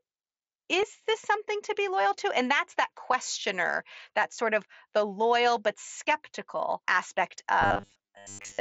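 Concealed Bluetooth headset packet loss occurs at 0.82 s, just before "this something to be", at 3.12 s, after "that's that", and at 4.36 s. Lost packets between headset and phone were patched by repeating the best-matching recent waveform. The first two cover about 7.5 ms each, which fits one lost frame, and the third about 15 ms. The first two are nearly hidden, showing only as a faint seam in the waveform and a brief smear in the spectrogram.

From 7.62 s after "loyal but skeptical aspect" to the end, the speech becomes a rigid metallic buzz at 100 Hz. This is likely robotic sound from repeated short buffers: a 10 ms stretch is replayed while most of the real audio is skipped. The waveform shows identical 10 ms cycles, and the spectrogram shows an evenly spaced 100 Hz harmonic comb.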